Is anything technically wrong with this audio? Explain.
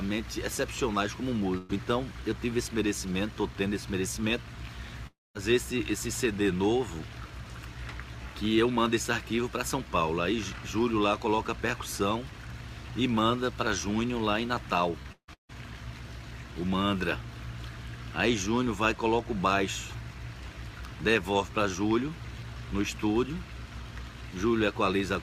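Yes, there are three network faults.

At 1.57 to 1.71 s there is a burst of packet loss. About 120 ms never arrived. The receiver stretched the last sound and faded it, then skipped ahead.

At 5.07 to 5.37 s the sound turns into a fading buzz or hiss, then silence. About 280 ms is lost. This is likely a long network dropout.

From 15.03 to 15.53 s, repeated packet loss makes the sound choppy and robotic. Four gaps, the longest about 154 ms, are patched with repeated sound covering roughly two-thirds of the stretch.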